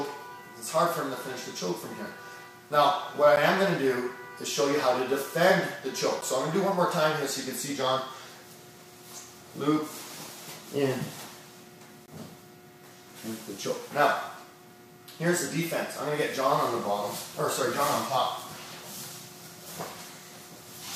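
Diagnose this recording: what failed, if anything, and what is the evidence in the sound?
Blocks of digital silence at 3.36 s, 6.21 s and 12.06–12.08 s: driver-buffer underruns zeroing 10–20 ms, with hard-edged cuts and no fade, unlike a network dropout's faded concealment.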